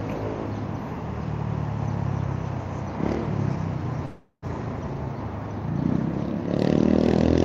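At 4.05 s the sound stops moving forward and the last moment is stretched into a fading buzzy hiss, ending in about 80 ms of silence before the audio picks up again at 4.44 s exactly where it left off, with nothing skipped. This is a call audio freeze. The likely cause is packets held up in transit, leaving the jitter buffer empty, so the receiver filled about 371 ms itself. Everything after runs about 371 ms later.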